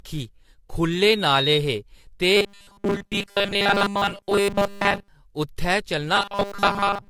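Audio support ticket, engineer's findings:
Generation loss, throughout. Swirly, hollow, smeared speech, blurred consonant attacks. Likely repeated lossy re-encoding, apparently several passes of AAC-LC near 64 kbit/s, each requantising on a shifted frame grid so artefacts accumulate.

Loudspeaker feedback squeal, 1.10–1.61 s. Single 3.8 kHz tone swelling over about 0.3 s to roughly speech level. Mic picking up its own loudspeaker, loop gain above one at that frequency, tone self-sustaining until the loop breaks.

Robotic sound from repeated short buffers, 2.37–5.08 s and 6.16 s to end. Rigid metallic buzz at 200 Hz, still loosely tracking speech. Likely input starvation, with playback looping a 5 ms buffer over most of the span while real audio is skipped, so the repeat rate sets the pitch.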